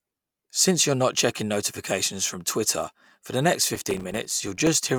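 A gritty burst of crackle tears through this speech clip from 3.76 to 4.67 s, starting right after "twitter for the next" and stopping abruptly once it ends. It is processor overload crackle: the processor kept missing its deadlines for very short audio buffers, a few milliseconds each, and every miss dropped a tiny slice to silence with hard edges. Some forty such dropouts packed into under a second are heard as continuous crackle.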